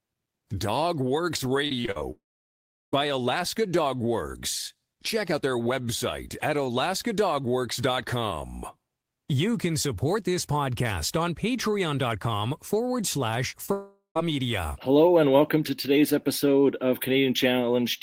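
Repeated packet loss (robotic sound) runs from 1.67 to 2.03 s. Five short holes, the longest 41 ms, are each patched by stretching the preceding sound. About a third of that span is filled this way, so the speech turns choppy and robotic.

A long network dropout follows from 2.11 to 2.94 s. The sound smears into a fading buzz, then goes silent for 0.72 s before resuming with a stretch missing. The likely cause is audio that never arrived over the network.

Short concealed packet loss occurs at 13.50 and 13.66 s. Each time, about 20 ms is lost and bridged by continuing the last sound, heard as a brief smear or wobble.

A second long network dropout spans 13.72 to 14.17 s. It has the same fading fill, with 0.14 s of silence before the sound returns without the lost part.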